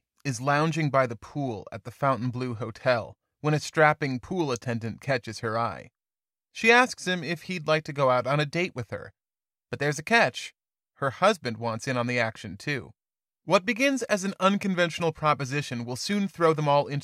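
No technical faults can be heard in this recording.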